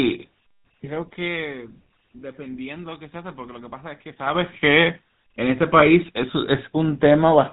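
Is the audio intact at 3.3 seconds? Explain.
No. At 3.3 seconds, as through the whole of the speech, the sound is buzzy and gravelly, with a hard ceiling at 4 kHz that leaves it dull and narrow. The damage is plainly audible. This is the GSM full-rate codec, at a rate that fits its usual 13 kbps. It models the vocal tract and drives it with a sparse, regularly spaced pulse train, keeping only every third excitation sample, which produces the rough, buzzing texture.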